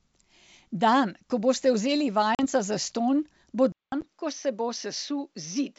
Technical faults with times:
2.35-2.40 packet loss on an ADPCM call
3.72-5.78 input switched to a poorer device
4.01-4.03 packet loss on an ADPCM call

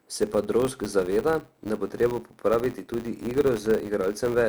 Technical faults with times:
0.00-4.48 filter restarted on every block

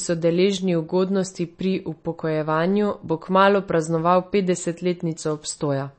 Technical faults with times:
0.00-5.98 MP3 compression

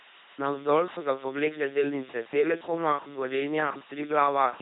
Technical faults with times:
0.00-4.61 low bit depth with dither
0.00-4.61 LPC-10 vocoder

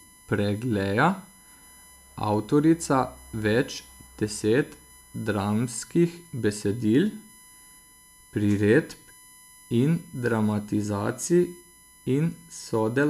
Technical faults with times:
0.00-13.09 USB whine

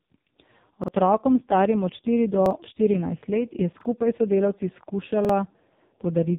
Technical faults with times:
0.00-6.39 AMR narrowband mobile codec
0.84-0.88 repeated buffer
2.46-2.51 repeated buffer
3.81-3.85 repeated buffer
5.25-5.29 repeated buffer

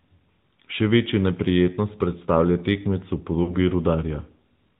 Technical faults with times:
0.00-4.79 AMR narrowband mobile codec
3.44-3.57 lost AMR speech frames

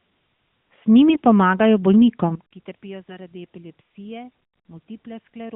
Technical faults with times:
1.09-1.21 AMR bit errors

